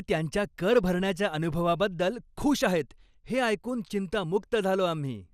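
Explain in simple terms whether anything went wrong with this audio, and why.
Throughout the speech there is a dull, gurgling, grainy distortion, with nothing above about 14.4 kHz. This is likely MP2 compression: upper bands flicker on and off, unlike a plain filter, which would sound dull but clean.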